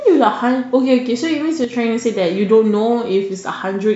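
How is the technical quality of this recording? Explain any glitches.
There's one real glitch in the speech, a brief one-channel dropout from 1.64 to 1.73 s. For just under a tenth of a second the level sags by about 6 dB and then snaps back. The likely cause is that one side of the stereo pair cut out momentarily. Folded down to mono, anything present equally in both channels loses half its contribution, hence the sudden 6 dB dip. Anything only on the missing side would vanish entirely for that stretch.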